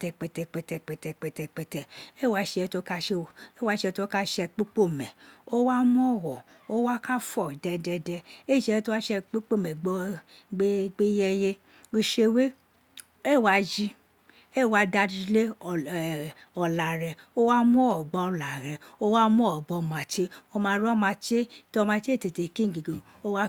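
No technical faults turn up anywhere in the speech recording, which holds steady and continuous throughout.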